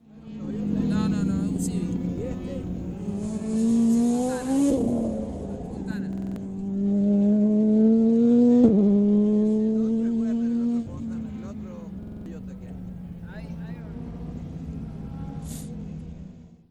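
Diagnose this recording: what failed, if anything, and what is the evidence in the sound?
A system hang loop at the driver or buffer stage. At 6.13 to 6.36 s and again at 12.03 to 12.26 s, a 46 ms slice repeats five times. That makes a 21.5 Hz stutter, and about a fifth of a second of sound is lost each time. This fits a 2048-sample ring buffer replaying while the host froze.

A Bluetooth SBC bit pool drop at the codec and link stage. From 6.76 to 9.35 s, and from 13.81 s to the end, the treble dulls and gritty noise rises. This points to the bit pool falling from 31 to about 13, near 94 kbps, starving the upper sub-bands.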